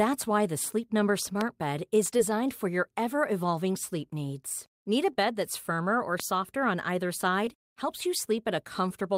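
A voltage step or spike, likely from a switch, plug contact or driver glitch, entered the signal path at 1.41 to 1.43 s, adding a single sharp pop that peaks roughly 15 dB above the speech while the talking carries on beneath it.

At 2.17 to 2.21 s, just before "for your ever evolving", a short concealed packet loss occurs: about 20 ms of audio never arrived in time, and the receiver patched roughly 12 ms of it by extending the preceding sound before blending back into real audio. The result is a brief smear at that point.

A second pop, again one pulse roughly 15 dB above the speech, lands at 6.20 to 6.22 s, between "that's firmer or" and "on either".

The second short concealed packet loss follows at 7.45 to 7.49 s, right after "on either". Another 20 ms gap was covered with about 17 ms of synthesized continuation, leaving a short wobble where the missing audio was papered over.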